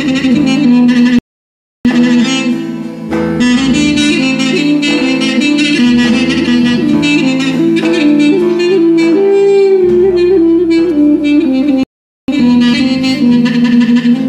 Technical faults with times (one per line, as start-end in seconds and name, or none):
1.19-1.85 rebuffering stall
11.83-12.28 rebuffering stall